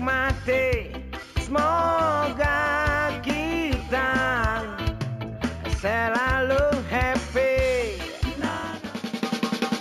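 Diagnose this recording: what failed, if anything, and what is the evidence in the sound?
Imaging from linear upsampling runs throughout the clip. It comes from the sample-format conversion stage, where the rate was raised by joining samples with straight lines. That interpolation filters poorly, so the top of the original band is dulled, and a mirrored copy of the spectrum remains between 8 and 16 kHz, around 30 dB below the signal. That fits a 16 kHz source raised to 44.1 kHz. The leftover image is heard as a faint metallic shimmer on the brightest parts of the sound.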